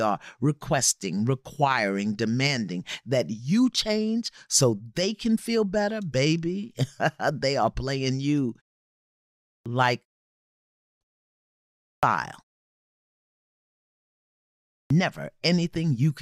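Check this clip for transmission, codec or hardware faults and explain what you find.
A hardware fault on the output side: the clip has a clipped start after a pause at 9.11 s (right after "they are playing you"), 10.41 s, 11.44 s, 13.03 s and 14.35 s. After each silence of roughly 0.4 to 0.8 s, the output device has gone to sleep and needs time to wake and lock again. The first 0.55 to 0.64 s of sound is swallowed, so speech bursts in abruptly without its opening sounds.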